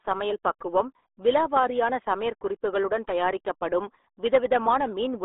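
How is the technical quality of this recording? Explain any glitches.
The technical quality is poor. The RealAudio 14.4 codec affects the whole recording, from start to finish. Nothing above about 3.8 kHz survives, and little below 300 Hz. The speech sits in a narrow telephone-like band. This codec models the voice at a very low data rate, and the heavy damage here points to roughly 8 kbit/s. It cannot hold fine detail. The speech sounds muffled and gargly.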